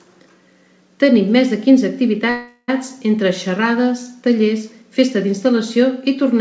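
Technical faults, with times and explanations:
2.30 to 2.70 s, call audio freeze: the speech stalls and the last sound is drawn out as a fading buzzy hiss for about 0.38 s, with only a very brief silence, then resumes where it stopped with nothing lost, so everything after arrives about 0.38 s late. The likely cause is packets held up in transit, leaving the jitter buffer empty so the receiver stretched the last sound until they arrived. The call path itself cuts everything above 8 kHz, which fits a G.722 codec.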